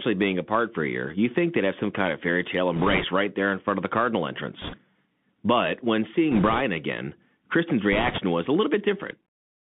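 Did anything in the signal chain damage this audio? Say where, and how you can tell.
Yes. At the codec stage, the whole clip has been through a Bluetooth CVSD headset codec. The speech sits in a narrow band of roughly 150 Hz to 3.5 kHz, with nothing above it, and the codec damage is plainly audible. CVSD encodes one bit per sample at 64 kHz, each bit stepping the waveform up or down with an adaptive step size. Fast, loud high-frequency content outruns that step, which roughens sibilants and leaves a granular hiss under the speech.

On the radio link, there are four bursts of bit errors on a Bluetooth voice link: 2.76–3.04 s (after "kind of fairy tale", before "right there in front"), 4.62–4.78 s, 6.32–6.61 s, and 7.93–8.20 s (just before "was a"). Each is a rushing, crackly noise over the speech rather than sharp clicks, with an error rate of a few percent. A flipped CVSD bit carries the same small weight as any other and its effect decays, so the errors come through as noise instead of loud pops.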